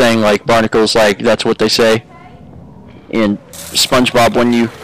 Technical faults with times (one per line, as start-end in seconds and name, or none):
0.00-4.83 hard clipping